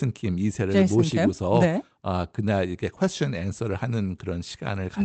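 Nothing here counts as a fault: the speech has simply come through an ordinary call connection, with its high end trimmed the way an Opus call codec narrowed to around 8 kHz would leave it.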